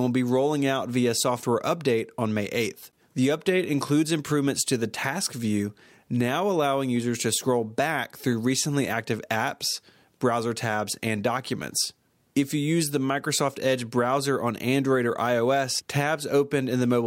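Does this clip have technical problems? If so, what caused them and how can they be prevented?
No, there are no technical problems to address here.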